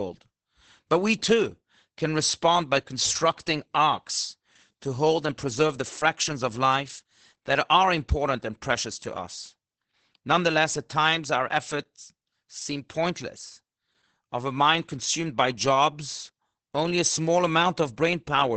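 Speech that sounds muffled, hoarse and faintly robotic for its whole length, with nothing above 8.5 kHz. That is heavy Opus voice compression: the SILK coder, running wideband, has cut the top band and coded the excitation coarsely, which fits a bitrate near 10 kbps.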